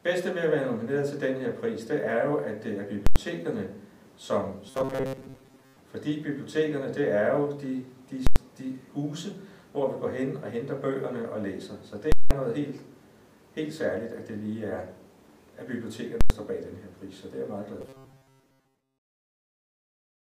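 At 3.07 to 3.16 s the first of four invalid-number blocks at full scale appears. A calculation produced infinite or invalid values, and the output was pinned at one extreme, far beyond the audio's own peaks. Further blocks follow at 8.27 to 8.36 s, 12.12 to 12.31 s and 16.21 to 16.30 s. The roughly 93 ms lengths fit a 4096-sample block, and the 186 ms one fits 8192 samples. Each is heard as very loud pops at its edges with no sound between. On a waveform it shows as a flat rectangular slab, and on a spectrogram as broadband vertical lines at each edge.

From 4.69 to 5.78 s, and again from 17.81 to 19.30 s, the audio turns into a rigid, metallic, robotic buzz at 133 Hz. The likely cause is repeated short buffers. New audio arrived too seldom, so a slice of roughly 7.5 ms was replayed over and over while the real material was skipped, with most of each stretch made of repeats. A spectrogram shows evenly spaced horizontal harmonic stripes at multiples of 133 Hz, and the waveform shows an identical short cycle repeating.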